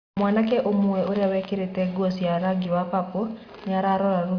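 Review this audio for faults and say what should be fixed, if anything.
No faults; nothing needs fixing.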